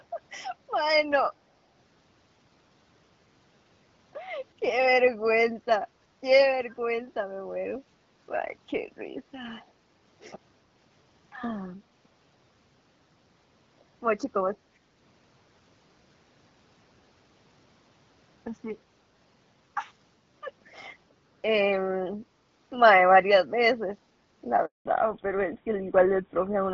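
Speech, carried over a wideband phone link with light codec coloring. At 6.7 s a very faint copy of the voice returns about 374 ms late, likely an echo leak from a loudspeaker phone's echo canceller. At 24.65 s the voice dies and stays silent for 200 ms until 24.85 s. That handover gap means the call switched networks and speech was lost. From 24.85 s to the end, everything above 4 kHz is gone. This fallback to narrowband leaves the voice duller and rougher, which fits a drop from HD Voice to an older GSM codec.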